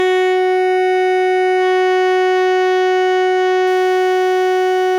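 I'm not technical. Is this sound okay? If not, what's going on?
No. From about 3.67 s until the end, the music picks up a faint gritty fizz: crude rate conversion. The audio was switched to a different speed setting by simply repeating samples instead of smoothing the change, which fits a move from 44.1 kHz to 48 kHz. Unlike overloaded, clipped audio, which crackles only on the loudest peaks, this adds thin, out-of-tune tones that trail the bright, high parts of the music.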